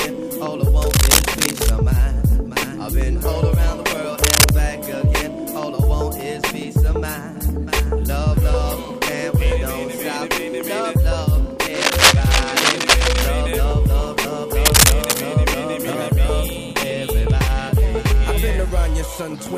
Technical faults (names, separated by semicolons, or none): cable scratch noise